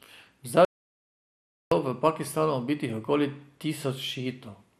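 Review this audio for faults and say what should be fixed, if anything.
MP2 compression, throughout the speech: the audio is dull, with nothing above 13.7 kHz, and a plainly audible gurgling, granular roughness. This likely comes from MPEG Layer II encoding at a rate that fits about 80 kbps. Layer II divides the spectrum into 32 sub-bands and shares out bits among them. When bits run short, the top bands are dropped and the remaining ones are coarsely quantised, leaving that flickering grit. Encode at 192 kbps or more, or use a more efficient codec such as AAC.

Audio dropout to silence, from 0.65 to 1.72 s: the speech cuts off abruptly and about 1.07 s is lost. The gap is silent with no room tone, and the speech resumes mid-flow. The likely cause is a lost input, such as a loose connection, a failed link or an accidental mute, while the recorder kept writing silence. Secure cables and links, monitor the input meters during capture, and keep a backup recorder running.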